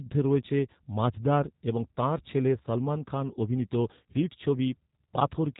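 G.729 codec damage throughout this speech: nothing passes above 3.8 kHz, and the rough, synthetic pulse-built rebuilding fits an 8 kbit/s G.729A stream.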